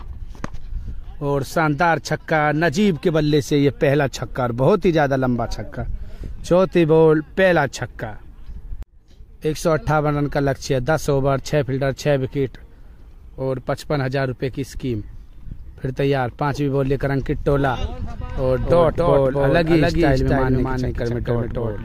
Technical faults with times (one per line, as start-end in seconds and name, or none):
18.37-21.85 doubled audio track